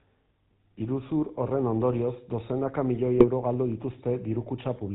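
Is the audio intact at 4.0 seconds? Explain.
No, at 4.0 s the speech is still running through the GSM full-rate codec, which colours the whole clip from start to finish. The codec rebuilds the voice from a vocal-tract model driven by evenly spaced pulses, keeping only every third excitation sample, so you hear a plainly buzzy, gravelly roughness and nothing above 4 kHz. That character fits a 13 kbps GSM full-rate stream.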